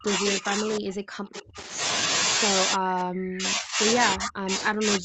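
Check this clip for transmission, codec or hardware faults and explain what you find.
Two faults stand out: repeated double-talk suppression and a brief echo leak.

Speech suppressed in double talk, 0.0–1.57 s, 2.75–3.83 s and 4.14 s to the end: the echo canceller, likely confused by simultaneous talk, ducks the speech by up to about 40 dB, so it dips and breaks up.

Echo leak, 1.34–1.62 s: residual loudspeaker echo, likely missed by the canceller, returns as a faint copy delayed 310 ms, about 20 dB below the speech.

The speech stays band-limited at 8 kHz, as expected from the Opus call path.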